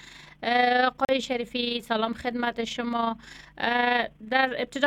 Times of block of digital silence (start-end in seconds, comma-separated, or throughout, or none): 1.05-1.09